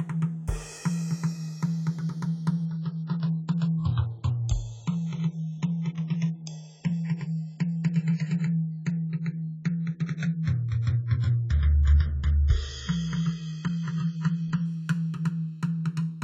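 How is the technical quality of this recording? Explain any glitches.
The music has two clear technical faults: a slow phasing movement across the whole clip and a long stretch of degraded, dull-sounding audio in the middle.

The phasing comes from the channels drifting apart throughout. The left and right channels appear to have been captured on devices running from separate clocks, with a mismatch on the order of a few tens of parts per million. The inter-channel delay therefore creeps steadily, ending at roughly three-quarters of a millisecond. Once the channels are summed, the resulting comb-filter notches glide through the spectrum, and the sound takes on a gradual flanging sweep.

From 2.65 s to 14.65 s the audio drops to an adaptive stream at a lower bitrate. When the connection slowed, the player switched to a far leaner version of the same stream, which fits a step down from a mid-rate AAC encode to something near the bottom of its range. 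During that window there is nothing above 7.7 kHz, so the top end is missing, and coding artefacts are more audible. Both the drop and the recovery are abrupt quality changes with no gap in playback.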